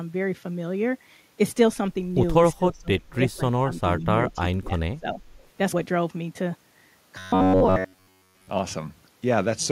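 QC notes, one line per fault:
2.57–4.07 s and 4.34–5.21 s, speech suppressed in double talk: the speech dips by roughly 30 dB at worst in the first stretch and roughly 20 dB in the second. This is likely an echo canceller that could not tell the near talker from loudspeaker echo while both sides spoke, so it pulled everything down together. Gain is lost here, with no extra sound added.
5.42–5.47 s, echo leak: a very faint delayed copy of the speech comes back about 359 ms after the original, roughly 40 dB below it. This likely comes from loudspeaker sound that the far-end echo canceller failed to remove completely. Unlike suppression, this adds a late duplicate.
7.18–8.50 s, robotic sound from repeated short buffers: the speech becomes a rigid, metallic buzz at 93.8 Hz that still roughly follows the words, and about 70% of the stretch is repeated material. That pitch fits a buffer of roughly 10.7 ms being looped, likely because new audio arrived too slowly. 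It has a fixed pitch, with no delayed echo.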